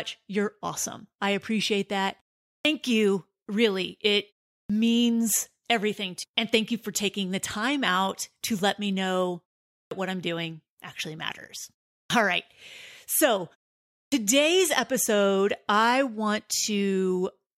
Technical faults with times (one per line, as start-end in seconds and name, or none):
2.59-2.65 clipped start after a pause
4.64-4.70 clipped start after a pause
9.86-9.91 clipped start after a pause
12.05-12.10 clipped start after a pause
14.07-14.12 clipped start after a pause